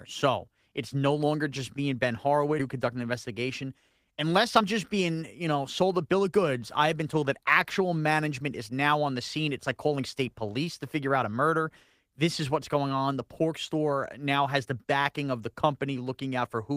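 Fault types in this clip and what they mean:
Skip ahead: At about 2.6 s the speech jumps forward with no pause and nothing filling the join, so roughly 0.4 s of what was being said is simply missing and the two sides butt together. Unlike a dropout, there is no silence, buzz or smeared concealment sound marking the spot. The only clue is the abrupt discontinuity in the flow of speech, as the playback delay shortens in one step.
Jitter buffer speed-up: From 4.05 to 6.54 s the speech runs at about 108% of normal rate and sounds slightly hurried. Tiny pitch-period-sized pieces are trimmed out repeatedly, together about a fifth of a second, to drain an overfull buffer. The pitch stays where it was, which separates this from a playback-rate or resampling error, and the shortening is spread thinly over the stretch rather than taken as one jump like the skip ahead.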